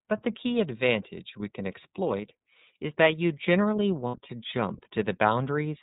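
Speech passed through the iLBC codec, a narrowband VoIP coder that handles each frame on its own, so nothing above 4 kHz survives. The coding damage is plainly audible as a rough, slightly synthetic edge throughout, which fits iLBC's 13.33 kbps mode with 30 ms frames. Lost iLBC frames cause a gap from 4.08 to 4.15 s, about 60 ms, which fits two dropped 30 ms frames. The decoder fills it by repeating the last pitch cycle mixed with noise, so it sounds like a held, buzzy vowel. The voice returns almost immediately because each frame decodes independently.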